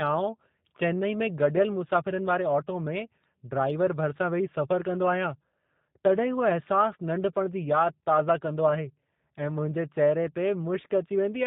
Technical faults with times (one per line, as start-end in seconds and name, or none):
0.00-11.47 G.729 codec